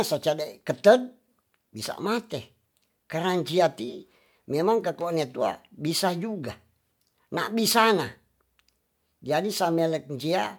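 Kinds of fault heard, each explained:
No faults turn up here; the speech comes through without any dropouts, glitches or other problems worth flagging.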